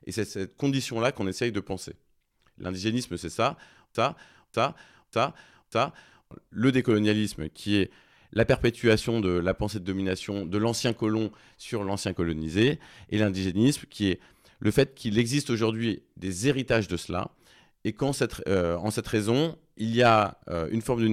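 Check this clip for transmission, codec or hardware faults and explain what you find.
One transmission fault stands out in this speech clip. From 3.95 to 6.31 s a fragment of about 0.59 s plays four times back to back, a stuttering broken-record loop that replaces the speech due there. The stream likely stalled and kept resending the last buffered fragment.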